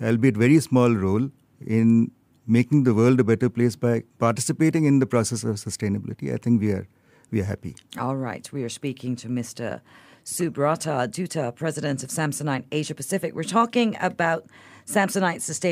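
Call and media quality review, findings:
No audible faults found in the speech path; nothing to action.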